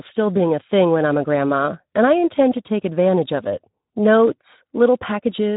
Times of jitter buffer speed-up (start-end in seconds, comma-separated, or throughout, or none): none